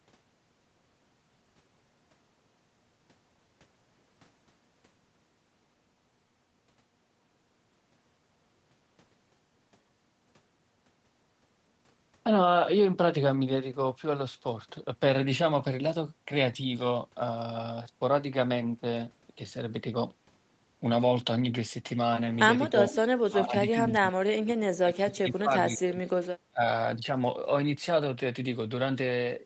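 Speech over a call path, with its top end stopping at 8 kHz as the codec and microphone processing allow, shows speech suppressed in double talk from 22.68 to 22.96 s, 23.25 to 23.56 s and 23.78 to 26.61 s. The level dips by about 15 dB at first, then by about 30 dB, with roughly two seconds lost in the last stretch, likely because the echo canceller muted the near talker while the far side spoke. An echo leak is heard at 22.91 to 23.02 s and 23.44 to 23.48 s as faint repeats trailing by 319 ms at about 15 dB below the speech, likely loudspeaker pickup that the canceller failed to remove.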